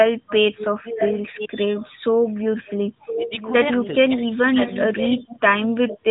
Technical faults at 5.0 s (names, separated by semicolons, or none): speech suppressed in double talk; echo leak